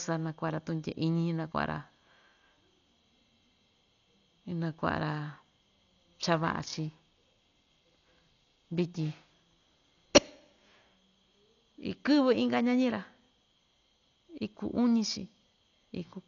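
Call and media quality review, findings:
Dolby Digital compression, whole clip. Speech dull, nothing above 6.9 kHz. Heavy codec damage: rough, fluttering noise hanging around voiced tones. Likely a low-rate AC-3 or E-AC-3 encode, consistent with about 48 kbps. Encoder starves many frequency lines of mantissa bits and the decoder fills them with dither noise. Unlike a plain low-pass, the band edge comes with grainy noise fill.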